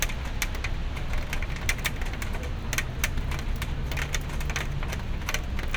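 Nothing stood out as a technical problem on listening to this recording of sounds.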